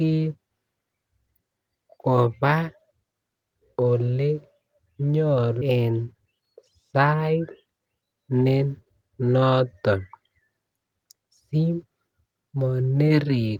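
At 5.61 s a skip ahead drops about a second of speech with no gap; the waveform splices directly, and spectrogram harmonics jump abruptly at one vertical seam. From 5.71 to 6.43 s a jitter buffer speed-up trims pitch periods, running 111% speed at unchanged pitch; the spectrogram shows compressed syllables and unshifted harmonic spacing.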